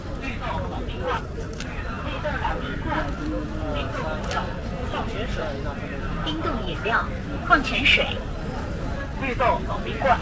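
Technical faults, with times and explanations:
Throughout: clock drift between sender and receiver. Faint, unevenly spaced timing hiccups come from the sender's clock running roughly 3% slow, which keeps draining the receiver's jitter buffer.
0.32–10.19 s: repeated timing corrections. The pace sags to 97% speed, with slight stutters, as the receiver keeps repeating short pieces to fill the gap, adding roughly 300 ms overall.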